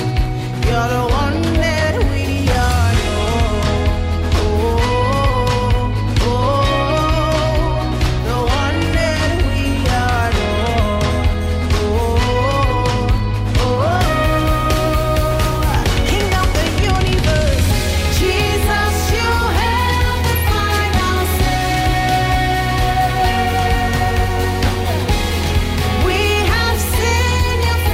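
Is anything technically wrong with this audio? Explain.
Yes. From 21.45 to 26.31 s, crude rate conversion repeats samples with no filtering, consistent with 44.1 kHz to 48 kHz, adding an inharmonic fizz about 25 dB down that tracks loud, bright sound, unlike steady hiss.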